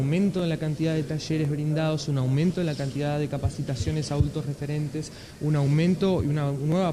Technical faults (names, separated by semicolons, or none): clock drift buffer slips